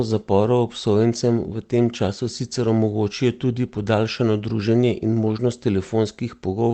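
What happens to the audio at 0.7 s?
Nothing goes wrong at 0.7 s: the speech there is intact, carrying only the ordinary character of the call path it passed through, with its high end limited to the codec's band of about 8 kHz.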